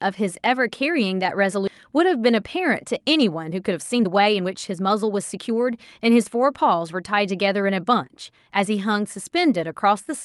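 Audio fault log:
1.67–1.69 s, skip ahead: The speech lurches forward with almost no gap, as though about a second of it has been cut out and the two sides butted together. The lost stretch never reaches the listener because playback had already moved on to later audio that was waiting. That discarded audio, not a pause, causes the abrupt join. The delay through the buffer drops by roughly the same second.
2.26–8.03 s, jitter buffer speed-up: Across these 5.8 seconds the speech runs about 10 percent fast and sounds hurried, yet its pitch stays put. The jitter buffer was holding more audio than its target, so it trimmed tiny slices, one or a few pitch periods at a time, over and over to drain the backlog. Together these removed around half a second. Over the Opus call path, audible band up to 12 kHz, this fits a 64 kbps stream.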